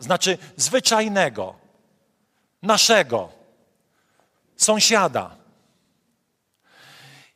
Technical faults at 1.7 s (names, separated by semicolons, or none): overlapping chunks